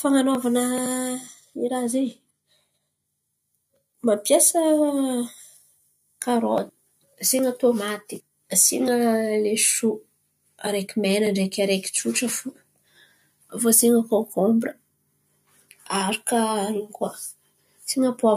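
Nothing goes wrong anywhere in this speech recording, so there isn't a single technical fault to point to.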